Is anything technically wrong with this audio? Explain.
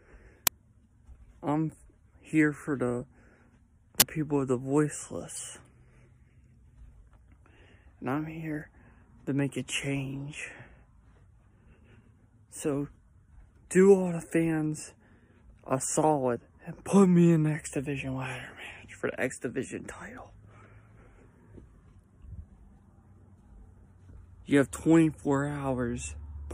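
Yes. An uninitialised buffer fault appears twice: a 10 ms burst at 0.47 s and a 20 ms burst from 4.00 to 4.02 s. In each case the playback chain sent out a block of memory before any audio had been written into it, so leftover garbage data was played as samples. The result is a brief, loud blast of harsh digital noise with no relation to the surrounding sound.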